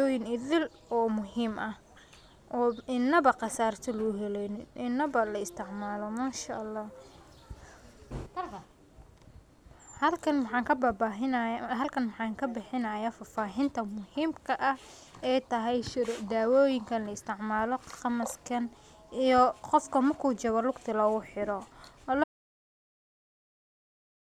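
A speech recording with an audio dropout to silence at 22.24 s: the sound stops abruptly mid-flow and never returns, leaving the final 2.1 s as silence. What sets this apart from a natural pause or a noise gate closing is the total absence of room tone and the lack of any fade or decay. The likely cause is the input being lost, through a disconnected device, failed link or stray mute, while recording continued.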